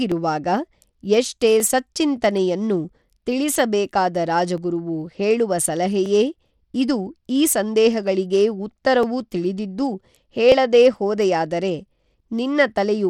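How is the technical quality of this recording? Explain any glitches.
The technical quality is compromised: the speech carries plainly audible codec damage throughout, and there's a regular click riding on it.

Bluetooth SBC compression runs the whole way through. The top end stops dead at about 17.5 kHz, and there's a gritty, coarse texture from heavily quantised sub-bands. That's likely SBC, and the damage fits a bitrate around 96 kbps, where the upper bands get starved of bits.

Clock drift buffer slips show up from 0.12 s to 12.0 s as about ten clicks, evenly spaced every 1.48 s. Two clocks running slightly apart, probably by several hundred ppm, let the buffer creep until a few dozen samples get dropped or repeated, and each slip pops.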